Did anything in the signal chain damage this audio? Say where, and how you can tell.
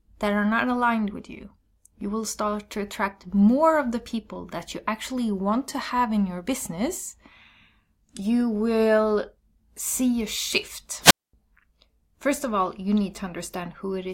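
Yes: a wireless microphone squelch dropout on the radio link, 11.01–11.34 s. Fading RF raises broadband hiss, then squelch mutes about 230 ms, a blank spectrogram gap.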